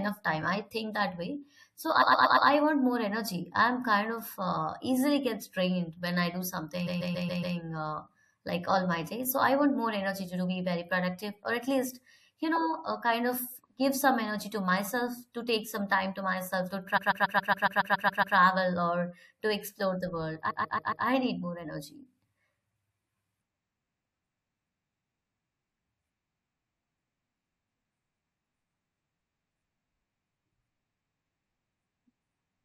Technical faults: repeated frames

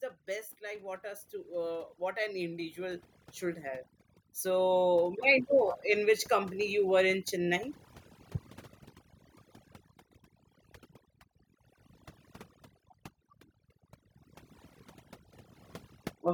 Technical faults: overdone noise removal; automatic gain rising

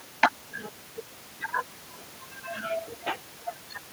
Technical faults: none

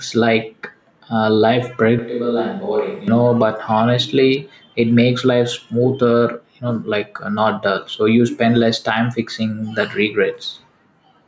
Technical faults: gain pumping; switch to a distant microphone

